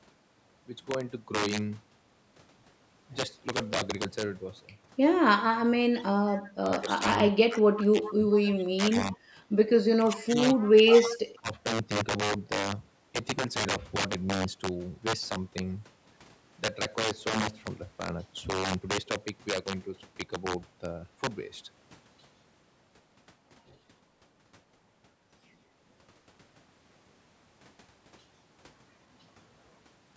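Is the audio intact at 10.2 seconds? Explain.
No. From 9.97 to 10.37 s the speech dips by about 20 dB. This is speech suppressed in double talk, likely an echo canceller turning down both sides. Integer overflow also runs throughout. Loud peaks, driven about 13 dB past the limit, wrap to the opposite sign and snap as sharp cracks.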